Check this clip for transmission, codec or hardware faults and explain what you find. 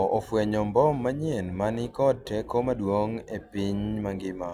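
One hardware fault is present. From 0.86 to 3.16 s, sample clock jitter of about a microsecond mistimes samples, adding faint hiss that tracks loud, bright speech and shows as high-frequency spectrogram haze.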